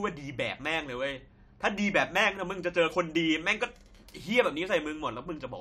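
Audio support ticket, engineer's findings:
No faults found on listening through the speech clip. Nothing heard that points to any component in the chain.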